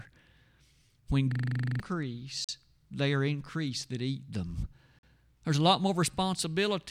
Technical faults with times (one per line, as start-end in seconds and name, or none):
1.32-1.80 system hang loop
2.44-2.49 gap between chunks
4.99-5.03 gap between chunks